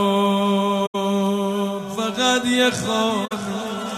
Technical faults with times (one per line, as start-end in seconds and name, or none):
0.86-0.95 corrupt frame concealed
3.25-3.32 corrupt frame concealed